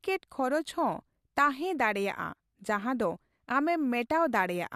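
No technical faults can be heard anywhere in the recording; the speech signal stays steady and intact for its whole duration.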